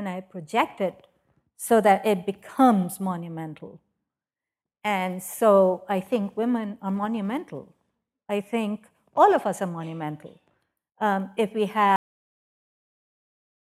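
At 11.96 s, right after "if we", the speech has a cut-off end. The final buffers were never written or played. The sound stops mid-phrase with no decay. Digital silence follows until the end of the clip.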